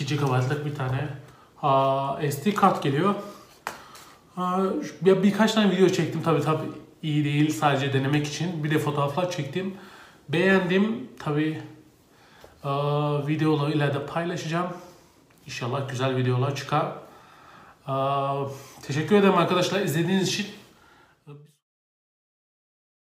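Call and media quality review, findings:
Nothing to flag here; the only notable event is the deliberate smooth fade-out easing down from about 20.5 s and finishing at 21.65 s, just as an editor would shape it.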